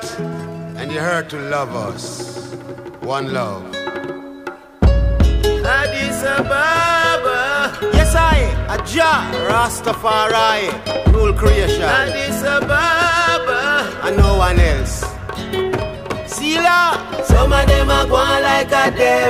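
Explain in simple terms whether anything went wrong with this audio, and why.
Nothing went wrong with this audio that a listener would notice. There are no dropouts, clicks, glitches or other technical faults anywhere in it.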